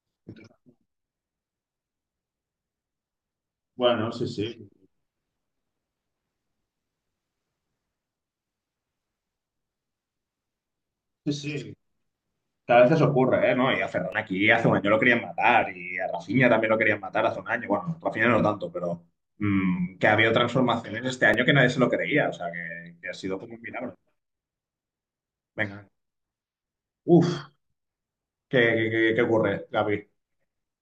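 A speech recording with two tiny clicks, each a short buzzy tick, at 14.12 s and 21.34 s. Both are a repeated buffer: fresh audio arrived late, so a 2.67 ms block, which fits a 128-sample buffer, replayed twice with hard joins, losing about 5 ms of speech.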